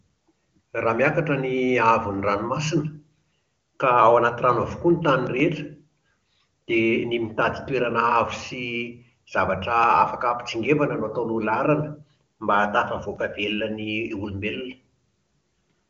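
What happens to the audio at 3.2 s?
Nothing goes wrong at 3.2 s: the speech carries on intact through that moment, with the AMR wideband (HD Voice) codec at 23.85 kbit/s leaving at most faint coding marks and nothing above about 7.4 kHz.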